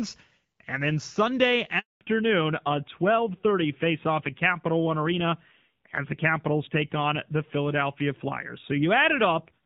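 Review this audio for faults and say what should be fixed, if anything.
A handover gap opens from 1.79 to 2.01 s: the call was switched from one network to another, and no speech frames reached the receiver during the move. The speech fades out within a few tens of milliseconds and stays silent for 220 ms until the new link begins delivering frames, so whatever was said in that window is gone. Preparing the target link before releasing the old one (make-before-break handover) would prevent it.

A fallback to narrowband follows immediately, from 2.01 s to the end of the clip. After the handover the call dropped from the wideband AMR-WB codec, whose light coding roughness before 1.79 s fits around 12.65 kbit/s, to narrowband AMR-NB, likely running near 7.4 kbit/s. Nothing above 4 kHz survives from that point on, so the speech loses its crispness and sibilance and sounds duller and rougher. 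Ensuring the new network supports and negotiates HD Voice would prevent it.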